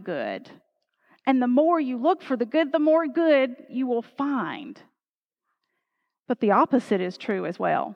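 Speech recording with no technical faults to report.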